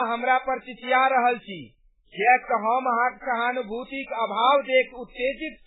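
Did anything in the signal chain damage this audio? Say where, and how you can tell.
Yes. Throughout, the speech sounds watery and swirly with nothing above 3.8 kHz. That points to likely heavy MP3 compression at the codec stage, consistent with a bitrate around 8 kbps.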